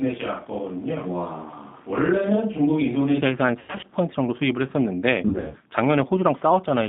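From the first moment to 3.2 s the speech sounds hollow and roomy, thin in the bass, about 5 dB quieter than the rest, with room noise sitting only around 30 dB below it. At 3.2 s it snaps to a closer, fuller sound. This is most likely a switch to a distant microphone, with a camera or room mic standing in for the close one. Poor placement or a reverb effect would not end abruptly mid-clip while also lowering the level.

Across the whole clip runs the G.729 codec at 8 kbit/s. The line passes only about 150 Hz to 3.7 kHz, and the speech has a slightly rough, synthetic grain. That grain comes from the decoder rebuilding each 10 ms frame from a vocal tract filter, a pitch predictor and a handful of pulses. Simple bandlimiting would sound dull but smooth, whereas this roughness is what marks a low-rate parametric codec.

From 3.59 to 3.85 s and again from 5.28 to 5.56 s there is VoIP packet loss concealed by the speech codec. 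In each span about 160 to 180 ms of audio is missing, scattered over roughly 240 ms, with gaps up to 100 ms in the first and 80 ms in the second. The decoder fills them by stretching its last pitch and filter into a fading buzzy tone or coloured noise, and the speech stays weak briefly after audio resumes. Plain dropouts would leave silence or clicks instead of this droning smear.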